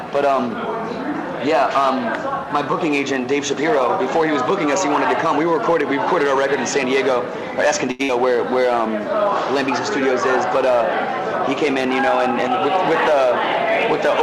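At 7.91 s a short stall from a late packet sets in and lasts until 8.01 s. The packet was not ready when it was due, so the jitter buffer emptied and the receiver held the last sound for about 79 ms. It then picked up exactly where it stopped, so nothing is lost, but the sound hangs with a faint buzz and the audio from there on runs 79 ms later.

Right after, from 8.03 to 8.11 s, comes a burst of packet loss. This time the missing stretch never arrives. The receiver fills about 54 ms by continuing the last sound and fading it down, heard as a dull held buzz or thinning hiss. Playback then jumps ahead, and about 60 ms of audio is gone. That skip, rather than a simple pause, is what separates it from the stall before it.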